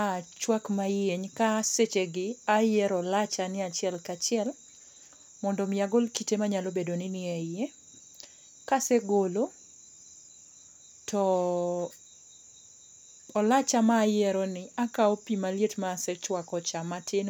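No technical faults are audible.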